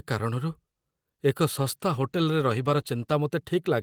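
A call bitrate drop runs from 1.5 s to 3.21 s in this speech recording. The call's bandwidth estimate fell, so the encoder was told to spend far fewer bits and began coding the speech more coarsely. The change is consistent with a fall from 32 to 16 kbps, held at the lower rate for about 1.65 s. Through that stretch the speech turns rougher and more watery before the bitrate recovers near the end.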